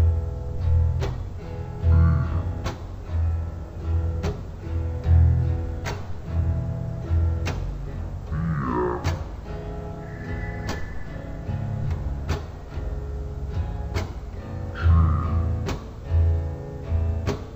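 For the whole clip, this is stereo read as mono: interleaved left and right samples are taken as one channel, so everything plays at half speed and an octave low. Unlike a simple sample-rate mismatch, a faint mirrored copy appears in the upper spectrum.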